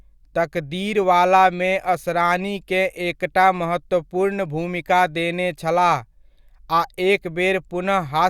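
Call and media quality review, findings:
No audible faults found in this speech recording.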